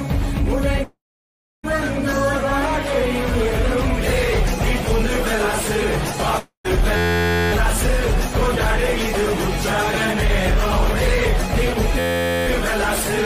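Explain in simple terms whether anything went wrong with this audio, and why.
Two things went wrong. A long network dropout is the likely cause of gaps at 0.83 to 1.65 s and 6.39 to 6.66 s. The sound smears into a fading hiss, goes quiet, and returns with that stretch missing.

A system hang loop causes steady buzzes at 6.97 to 7.52 s and 11.99 to 12.47 s. One tiny 11.6 ms slice repeats about 86 times a second, which fits a 512-sample buffer.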